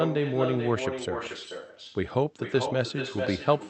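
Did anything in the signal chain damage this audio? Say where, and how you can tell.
Yes. At the call-processing stage, the far end played the call through a loudspeaker with no echo canceller, so its microphone returned the speech. This echo with no canceller shadows the speech throughout, arriving roughly 400 ms late at about 6 dB down, sounding thinner.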